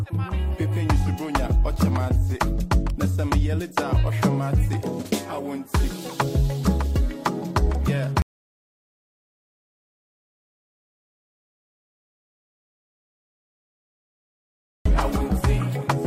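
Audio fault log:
8.22–14.86 s, audio dropout to silence: input signal likely lost while recording continued writing silence, so sound stops abruptly for 6.63 s into dead silence without room tone.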